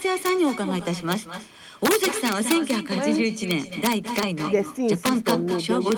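A speech recording carries an echo with no canceller throughout: a thinner copy of the talker trails each phrase by roughly a fifth of a second, about 10 dB down, as the far end's loudspeaker leaks back into its microphone. On a spectrogram every syllable has a fainter ghost offset to the right. Integer overflow produces violent cracks at 0.26–0.29 s, 1.12 s, 1.85–2.70 s, 3.51–4.23 s, 5.06–5.31 s and 5.92 s, where peaks up to about 3 dB past full scale wrap to the opposite sign. The waveform shows these as sudden full-height jumps from top to bottom, and the spectrogram shows bright vertical broadband streaks.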